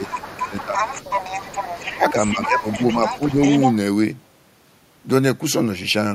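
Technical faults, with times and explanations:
0.00–0.81 s, 1.96–2.15 s and 2.33–2.99 s: speech suppressed in double talk. With both ends talking at once, the echo canceller likely mistook the near talker for loudspeaker echo and attenuated everything, so the speech dips by as much as about 10 dB.
0.06–3.75 s: other side's voice leaking through. The far-end voice, played on the talker's loudspeaker, was likely not fully cancelled from the microphone signal, so a second voice runs underneath, only about 5 dB below the main speech.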